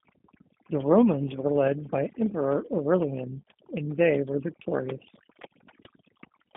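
Overdone noise removal runs from the start of the speech to its end. A noise reduction stage set far too aggressively pushes individual frequency bands down or off whenever their level sits close to its noise estimate, so the quieter parts of the voice are cut along with the noise. Between phrases the background drops to near silence scattered with twinkling specks.

G.729 codec damage, in its G.729A form at 8 kbit/s, is also present throughout and plainly audible. The codec doesn't store the waveform. It rebuilds each 10 ms frame from a vocal tract filter, a pitch predictor and a few pulses, and the line band runs only from 150 Hz to 3.6 kHz, with nothing above 3.6 kHz. The speech stays intelligible but sounds muffled, slightly rough and synthetic, and the leftover specks from the noise removal warble.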